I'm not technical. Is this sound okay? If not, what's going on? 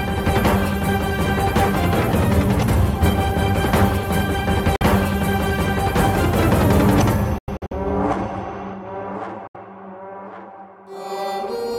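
No. Bluetooth dropout, likely, at 4.76, 7.38 to 7.73 (a cluster of short gaps) and 9.47 seconds. Chunks of audio reach the headphones too late and are discarded. You hear brief silences, and then the sound resumes further along, as though it kept playing.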